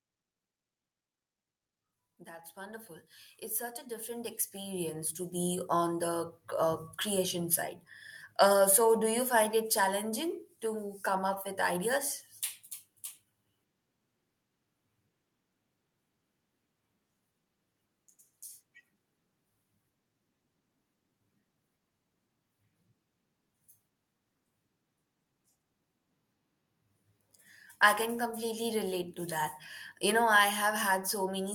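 From 2.04 to 5.95 s, automatic gain rising lifts everything about 14 dB; speech and background swell together gradually, unlike a compressor's release, which follows each syllable.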